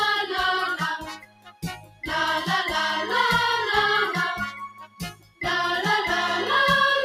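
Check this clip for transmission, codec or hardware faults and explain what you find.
A speech-tuned noise suppressor is processing non-speech audio, producing two kinds of fault.

Throughout, the noise suppressor applied to music or sounds mistakes sustained tones and ambience for noise. Its gain swings by roughly 15 dB, so the sound pumps and thins.

From 0.97 to 2.05 s and 4.51 to 5.41 s, sound is cut by the noise suppressor. Held or decaying material drops by up to about 21 dB and sinks away while sharper onsets survive.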